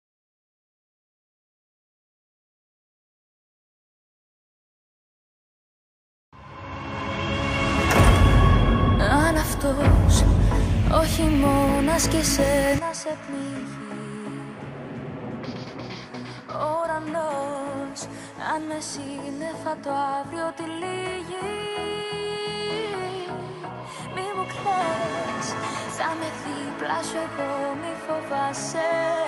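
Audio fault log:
12.79–29.27 s: input switched to a poorer device, likely; sound turns duller and about 10 dB quieter, nothing above 11.4 kHz, with added background noise, no gap at the switch.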